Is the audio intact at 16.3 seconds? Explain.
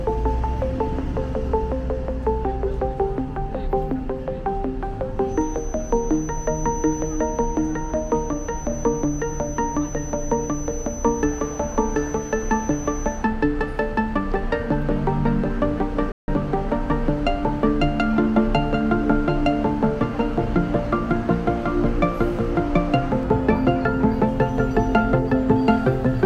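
No, there's a playback stall from 16.12 to 16.28 s: the sound cuts to silence for about 160 ms, likely because the player ran dry, then resumes.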